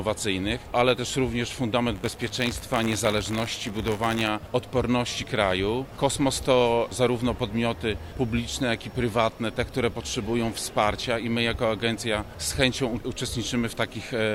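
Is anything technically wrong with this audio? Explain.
Yes. From 1.94 to 4.29 s there is buffer tearing: a robotic rattle at 100 Hz. The writer and reader of the ring buffer have slipped, so a sliver of each 10 ms period, around 2%, repeats audio from roughly 20 ms earlier. The waveform shows hard joins every 10 ms, and the spectrogram shows vertical striping with harmonics at 100 Hz spacing.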